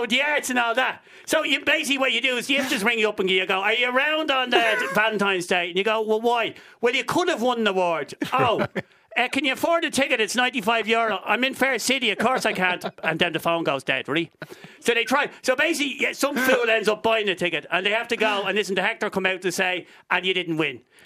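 No technical faults occur, so there is nothing to describe in time order.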